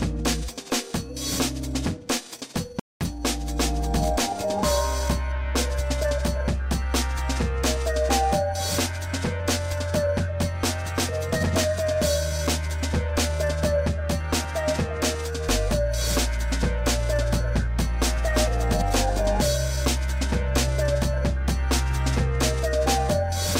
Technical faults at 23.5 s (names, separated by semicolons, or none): none